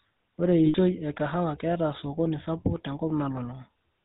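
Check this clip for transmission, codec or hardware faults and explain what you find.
Two faults are audible: the speech has passed through the GSM full-rate codec for its whole length, and a short run of lost GSM frames interrupts it once.

GSM full-rate codec, throughout: The encoder reduces the speech to a vocal-tract filter excited by evenly spaced pulses built from a decimated residual, and it discards everything above 4 kHz. This fits the 13 kbps GSM full-rate coder. The damage is plainly audible as a dull, band-limited sound with a buzzy, gravelly grain over every voiced stretch.

Lost GSM frames, 0.66 to 0.77 s: Some 80 ms of frames never arrived intact, which fits about four 20 ms frames. The decoder filled the gap by reusing the last good frame's parameters. Instead of new speech, the sound freezes into a brief rough, metallic ringing. Speech resumes with "e kahawa ketaa osokoni".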